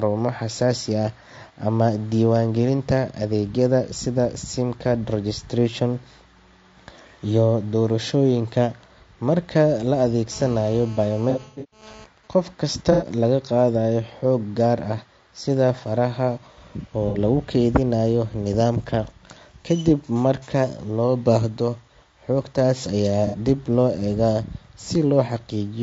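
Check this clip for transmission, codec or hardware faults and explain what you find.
Four kinds of fault are present: codec damage throughout, interference from a nearby 2G phone, and several dropouts patched over by the decoder.

Low-delay AAC compression runs through the whole speech clip. The likely cause is AAC-ELD at a low bitrate, around 32 kbps. Its short frames capture pitch harmonics poorly, so the voice sounds plainly rough and grainy, with noise filling the gaps between harmonics and a thin, artificial top end.

GSM phone buzz runs from 10.32 to 12.05 s. A nearby phone in a call transmits radio bursts about 217 times a second, and the audio circuitry rectifies them. The result is a steady, raspy 217 Hz buzz with many harmonics, about 23 dB below the speech and unrelated to it.

AAC frame loss with concealment occurs at 11.30 to 11.83 s, 12.92 to 13.06 s, 17.09 to 17.18 s, and 23.27 to 23.36 s. 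The last one falls between "loo baahdo xogtaas ayaa" and "dib loo eegaa". Lost frames were filled in from the last good spectrum. In the first event, about 330 ms went missing across 420 ms, with the longest gap roughly 150 ms, which gives a smeared, noisy, phasey patch. The later losses of 90 ms and 60 ms are brief blurred smudges.

GSM signalling bursts follow from 12.06 to 14.22 s. The same phone, still in its call but with its user silent, sends only occasional groups of bursts. These are rectified into faint even ticks with a longer 217 Hz buzz twice a second, some 35 dB down.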